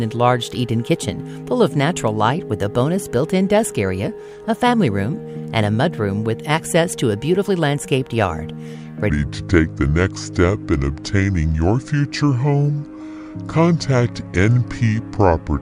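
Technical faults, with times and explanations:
9.10–15.62 s, section at the wrong speed: the sound turns deep and sluggish, playing at 0.668 times speed and about seven semitones low, likely from a mismatched playback clock.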